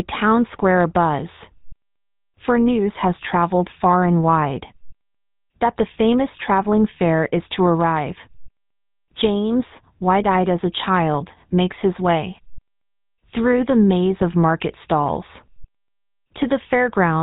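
GSM full-rate codec damage runs throughout this speech clip: pulse-driven vocal-tract coding, consistent with a 13 kbps stream, cuts everything above 4 kHz and leaves a plainly audible buzzy, gravelly roughness.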